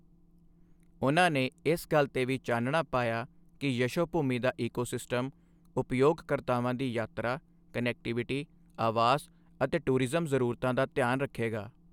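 Nothing goes wrong anywhere in this recording of speech, so there's nothing to point to along the way.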